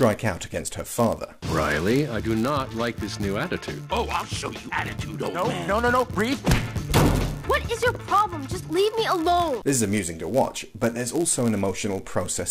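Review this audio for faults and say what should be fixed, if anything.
Block size mismatch (padded), throughout: zero gaps in every block chop the sound into a 99.6 Hz buzz, unlike added mains hum, and slow it to 0.996 speed, timbre unchanged.

To prevent it, make each stage write blocks of exactly the size the next stage reads.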